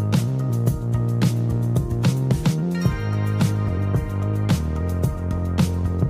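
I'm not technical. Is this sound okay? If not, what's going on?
Yes, it's fine: nothing in this clip sounds broken or glitchy, so there's nothing here to worry about.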